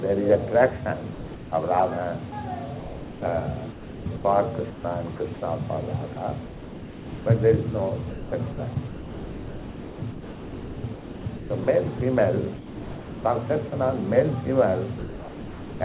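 At 1.14 s the sound gives way to steady synthetic noise until 1.52 s, roughly 0.37 s in which nothing of the original survives. This is sound dropped by the voice detector: the sending end's detector likely judged the material to be background, stopped transmitting, and the receiver filled the gap with comfort noise. The same thing happens at the end, from 14.98 s to 15.8 s, where about 0.82 s is lost to the same flat noise.

Between those two drops are four stretches of sound chopped by the voice detector: 2.3 to 5.42 s, 6.14 to 7.26 s, 8.1 to 12.0 s and 12.56 to 13.72 s. In each, the detector likely toggled repeatedly between sending and muting, so pieces of sound are cut out and replaced with comfort noise. About 1.1 s, 0.8 s, 2.7 s and 0.7 s are replaced in these stretches. The result is choppy. Throughout the clip nothing is present above 4 kHz, consistent with a narrowband G.711-type call path.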